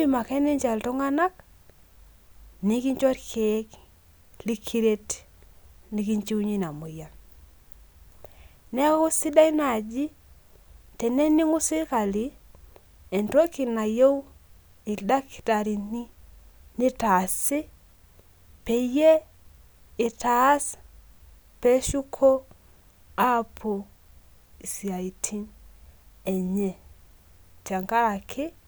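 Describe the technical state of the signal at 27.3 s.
At 27.3 s the speech signal is intact, with no dropout, clipping, distortion or other fault to be heard at that moment.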